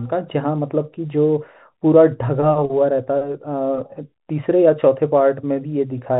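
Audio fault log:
No faults are present in the recording. The G.711 telephone coding can be heard as a narrow band with nothing above 4 kHz, and any quantisation noise is faint and rises and falls with the level of the speech.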